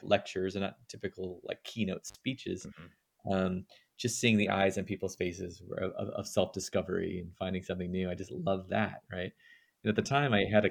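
An intermittent contact breaks the sound between 2.08 and 2.16 s. A loose connection opens for about 50 ms, leaving crackle at the edges and faint hiss.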